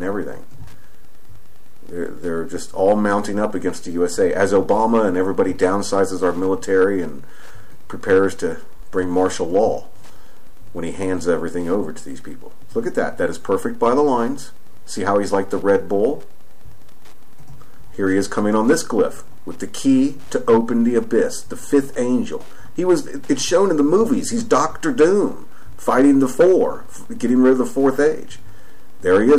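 Throughout, Wi-Fi interference: the audio circuit rectifies a nearby radio's beacon every 102.4 ms, producing faint, steady ticking about ten times a second, roughly 40 dB below the sound.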